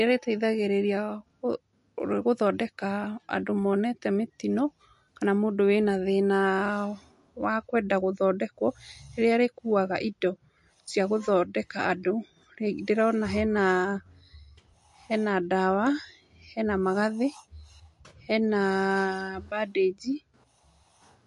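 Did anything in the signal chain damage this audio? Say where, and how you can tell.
Yes. MP3 compression damages the speech throughout, at the codec stage. Nothing is present above about 11.3 kHz, and the sound has a watery, swirling quality with smeared consonant onsets. The cause is likely a lossy MP3 encoder short of bits, with damage at a level that fits roughly 48 kbps. It cut the treble at a fixed frequency and dropped weak frequency lines, which flicker on and off between frames and produce that swirl.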